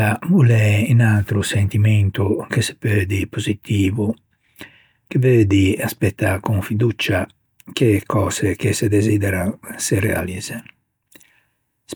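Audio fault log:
Nothing stood out on listening to this speech clip.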